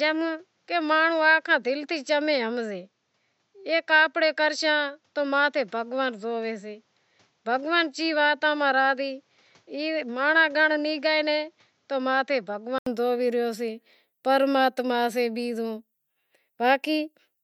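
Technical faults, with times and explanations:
0.00–12.86 s, input switched to a poorer device: the speech sounds dull and boxy, with nothing above 7.7 kHz and faint background noise well below it, then clears after an 80 ms silence at 12.86 s, loudness unchanged. It was likely recorded through a narrower-band microphone.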